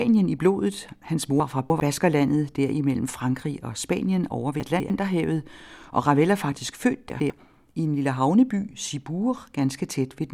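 Three brief jumbled moments, at 1.4 to 1.8 s, 4.6 to 4.9 s, and 7.1 to 7.3 s just after "er faktisk født", are chunks out of order. In each, a short piece of speech turns up a little after the audio that should follow it, so nothing is missing but the sequence scrambles, with hard joins at each seam. The pieces sound about 100 ms long, and the misplaced one lands roughly three, two and then one chunk late.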